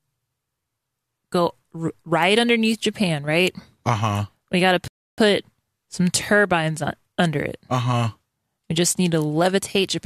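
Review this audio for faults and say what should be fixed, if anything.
A rebuffering stall occurs from 4.88 s to 5.18 s: the player drained its store of downloaded audio and halted playback until more data arrived. The speech cuts abruptly to silence for about 0.30 s, then picks up at exactly the point where it stopped, so nothing is skipped, but the clip runs roughly 0.30 s longer than it should. To prevent it, hold a larger playback buffer or lower the stream's bitrate when throughput drops.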